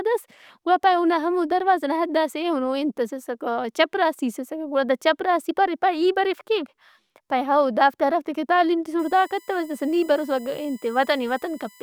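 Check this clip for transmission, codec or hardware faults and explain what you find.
One fault here, USB whine. From 8.99 s, right after "ہرافت ئے کہ تعلیم", to the end, a steady tone sits under the speech at 1 kHz, strongest at its 2 kHz harmonic, roughly 30 dB down. That's the bus's 1 ms frame current leaking through power or ground into the audio.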